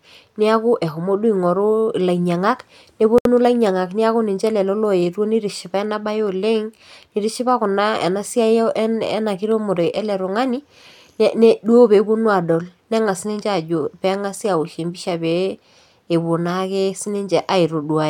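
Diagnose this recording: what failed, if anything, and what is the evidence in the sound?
A codec-stage fault: a gap at a join of encoded pieces opens in the speech from 3.18 to 3.25 s, a gap of 69 ms. Encoder start delay and last-frame padding were left in. The speech resumes exactly where it stopped, so no sound is lost, unlike a network dropout.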